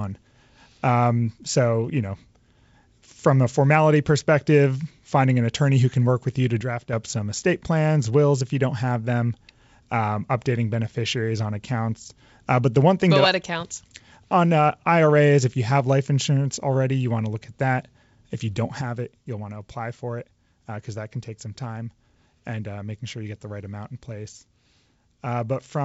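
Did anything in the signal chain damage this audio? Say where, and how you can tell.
Yes. The level of the speech drops abruptly by about 6 dB from 6.61 to 6.93 s, then again from 18.81 s to the end of the clip. This is likely one channel dropping out at the analogue wiring stage, such as an intermittent stereo lead, before the signal is summed to mono. A gain ride or fade would ramp and would rarely land on such a clean figure. An instant step of about 6 dB is exactly what losing half of a mono sum produces. The G.722 wideband coding downstream simply carries the quieter signal.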